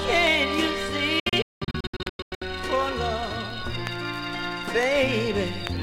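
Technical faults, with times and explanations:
1.20–2.42 s, digital broadcast dropout: the receiver stopped getting decodable frames and muted until good ones returned, so the sound breaks up into several short holes that add up to roughly 0.77 s of silence across about 1.2 s. The longest hole lasts 192 ms, and the hole lengths fit lost frames of about 32 ms each. Each mute ramps in about 3 ms, so the edges are abrupt. The waveform shows flat gaps, and the spectrogram shows full-height blank vertical bands.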